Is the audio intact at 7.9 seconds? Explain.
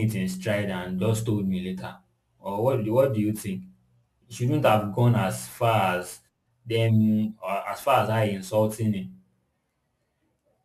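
No. At 7.9 seconds, as across the whole clip, the speech carries crude rate conversion. Samples were repeated rather than filtered, consistent with a 32 kHz to 44.1 kHz nearest-sample conversion. This leaves an error roughly 25 dB below the speech, heard as a gritty, inharmonic fizz riding on louder and brighter syllables. A spectrogram shows faint spurious lines unrelated to the harmonics, including mirrored energy above 16 kHz. The waveform zoomed in shows small stair-steps.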